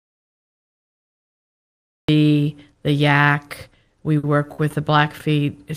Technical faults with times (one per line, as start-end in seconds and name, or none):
0.00-2.08 audio dropout to silence
3.87-3.92 short stall from a late packet
4.18-4.25 short stall from a late packet
4.53-4.60 short stall from a late packet